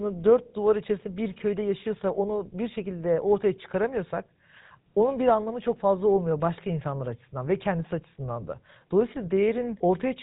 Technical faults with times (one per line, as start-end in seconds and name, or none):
0.00-10.22 GSM full-rate codec